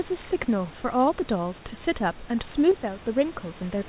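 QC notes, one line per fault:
2.72–3.04 s, one channel drops out: the speech suddenly falls by about 6 dB for 0.33 s, then snaps back. The likely cause is one stereo side going silent, so the mono sum keeps only half the content both sides shared.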